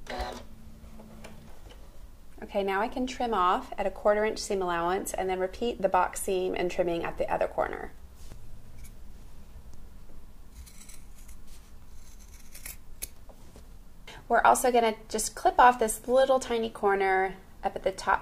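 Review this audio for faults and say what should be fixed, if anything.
Nothing needs fixing, as the signal holds steady throughout with no audible technical fault at any point.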